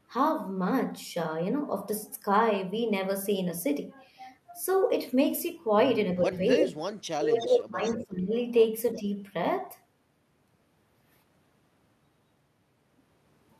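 Between 6.3 and 9.1 s this speech recording has two kinds of fault. The talker's level dips slightly (about 5 dB) at 6.25–6.29 s and 8.96–9.06 s, and falls sharply, by about 25 dB, for roughly a second within 7.01–8.33 s. This is speech suppressed in double talk. The echo canceller likely confused near speech with loudspeaker echo while both sides talked and turned everything down. A delayed copy of the voice, about 0.35 s late, also comes back at 6.33–6.94 s at roughly speech level, then more faintly at 7.39–7.49 s (about 10 dB down), 7.83–8.05 s (about 20 dB down) and 8.94–8.98 s (about 25 dB down). This echo leak is likely residual loudspeaker pickup that the far side's canceller failed to remove.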